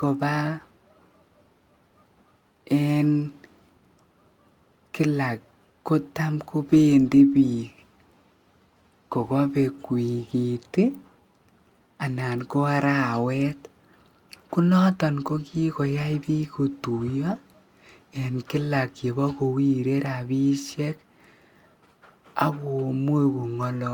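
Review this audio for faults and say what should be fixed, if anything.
Nothing here needs fixing, since I didn't hear any technical faults anywhere in this speech recording.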